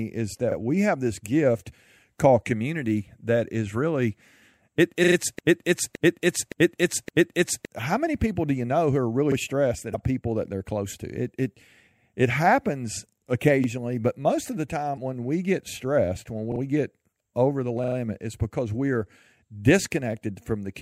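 The speech opens with a brief stutter at 0.52 s, where a 40 ms slice sounds twice with a hard join. This is a repeated buffer: fresh audio arrived late, so the output replayed its last 40 ms block. The same stutter returns at 5.04 s (three extra plays), 13.64 s (one), 16.52 s (two) and 17.84 s (three). Around the stutters at 16.52 and 17.84 s, the landmarks are "we get stressed when", "get over the" and "it's because we're". Nothing seems skipped; each repeat just delays what follows.

From 5.39 s to 7.65 s a fragment of about 0.57 s plays back to back, identically, four times, with the audio due in that stretch lost. This is a broken-record loop. The player, encoder or stream likely stalled and kept resending the last fragment it held.

A short glitch of about 42 ms breaks in at 9.91 s, and another of about 44 ms at 14.94 s, between "but most of the" and "when we get stressed". These are damaged data in a compressed stream. 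Corrupted bytes left the decoder unable to read the frames there, so it lost sync and jumped forward to the next valid frame header.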